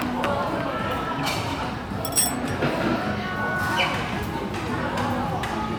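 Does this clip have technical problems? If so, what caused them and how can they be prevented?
No, nothing in this audio stood out as a technical problem on listening, so there is nothing here that needs preventing.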